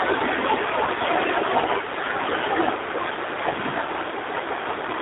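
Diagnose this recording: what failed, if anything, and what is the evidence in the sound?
Codec stage: G.729 coding at 8 kbit/s runs throughout, with the speech confined to roughly 300 Hz to 3.7 kHz and a rough, synthetic texture from pulse-based excitation, unlike clean band-limiting.

Network stage: VoIP packet loss concealed by the speech codec occurs at 0.85 to 0.90 s, about 20 ms, fitting one lost packet. The decoder extrapolates from its last pitch and filter with fading gain rather than leaving a silent gap.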